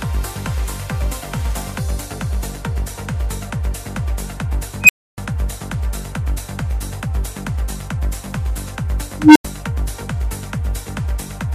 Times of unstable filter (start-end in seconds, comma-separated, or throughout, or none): 4.83-5.18, 9.19-9.45